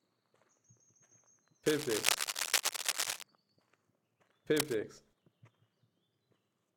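Cable scratch noise appears from 1.66 to 3.23 s and again from 4.52 to 4.75 s. Dense, irregular bursts of crackle and rustle ride over the sound, the first stretch roughly as loud as the audio itself, the shorter second one a little quieter. The likely cause is a worn cable, plug or control being moved, its contact resistance jumping rapidly and injecting that scratchy noise into the signal.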